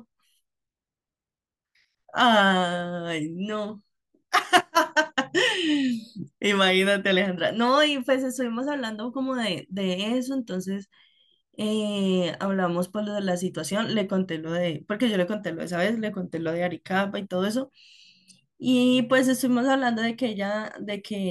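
Nothing in this speech recording stands out as a technical fault, so there's really nothing to flag here.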